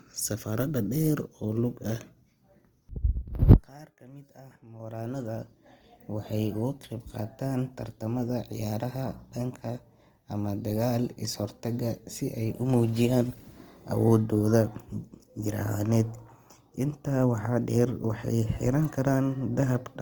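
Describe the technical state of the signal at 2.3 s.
At 2.3 s the speech carries Opus compression, and it runs through the whole clip. The codec damage is plainly audible as roughness and a grainy, noisy texture on voiced sounds, likely from Opus in its CELT music mode at a rate near 24 kbps. Bands short of bits are filled in rather than dropped, so there is less of the swirling, holey sound of MP3. The bandwidth stays full, reaching about 20.2 kHz.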